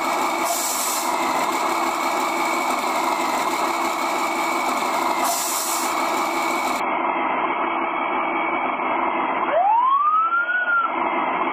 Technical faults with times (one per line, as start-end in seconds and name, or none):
6.80-11.53 adaptive stream at a lower bitrate